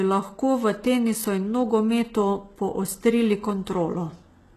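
From start to end the speech carries plainly audible codec damage, most likely from HE-AAC compression at a low rate, consistent with roughly 16 kbps. The treble is not original but regenerated from copied lower bands under a coarse envelope, so its harmonics fail to align with those below the crossover. S sounds come across gritty and metallic or lispy, and nothing remains above 12.4 kHz.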